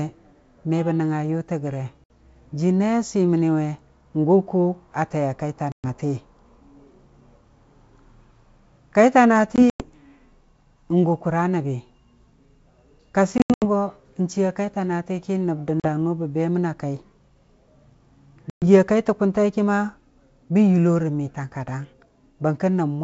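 Packet loss on an ADPCM call cuts hard-edged holes at 2.04 s (60 ms), 5.72 s (120 ms), 9.56 s (120 ms scattered over 240 ms), 13.38 s (180 ms over 240 ms, before "go n'chiiya kaita"), 15.80 s (40 ms) and 18.50 s (120 ms). Each shows as flat silent stretches in the waveform and blank vertical bands on the spectrogram. Afterwards the decoder's predictor and step size disagree with the sender's, so the sound resumes slightly distorted for tens of milliseconds.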